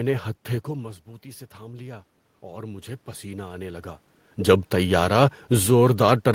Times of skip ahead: none

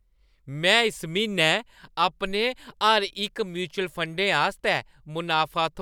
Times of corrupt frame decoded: none

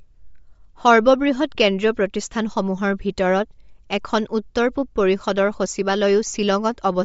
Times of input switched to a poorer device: none

